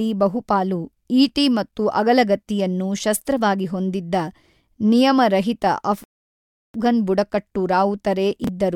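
At 6.04 s the speech halts in a rebuffering stall: playback ran dry waiting for more data and sat silent until 6.74 s, adding about 0.70 s. Unlike a dropout, nothing is missing, and the speech picks up exactly where it paused.

Between 8.44 and 8.48 s, chunks arrive out of order: a 10 ms chunk plays three chunks later than it should. All the audio is present but shuffled, so instead of a clean gap there's a brief jumbled blip with three hard joins.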